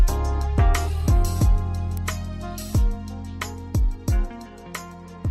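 At 1.97 s a single sharp snap cuts across the sound. It is an electrical switching spike, lasting only about a millisecond. It peaks at around -15 dBFS. The likely cause is a nearby switch, motor or static discharge arcing once. That arc induced a brief voltage jump on the audio line. The spike sits on top of the sound rather than replacing it, so it reads as a crisp click.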